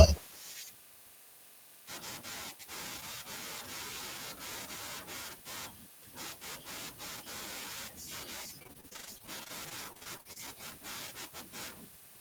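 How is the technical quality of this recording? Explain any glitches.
The speech has one glitch: repeated packet loss (robotic sound) from 8.59 to 10.37 s. Around two dozen short holes, none longer than 39 ms, are each patched by stretching the preceding sound, so about a quarter of that stretch is filled-in audio. The effect is choppy, with pieces missing. Unlike a single dropout, the breaks recur in rapid succession.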